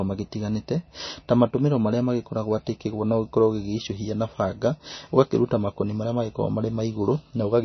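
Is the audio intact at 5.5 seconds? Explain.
No. At 5.5 seconds the speech carries the same damage heard across the whole clip. Nothing is present above about 6.1 kHz, so the top end sounds dull and boxed in. The sound also has a watery, swirling quality, and s sounds come out chirpy and metallic. This is likely MP3 compression at a very low bitrate, around 26 kbps. Starved of bits, the encoder cuts the treble at a fixed point. It also drops weak frequency detail, which flickers in and out from frame to frame.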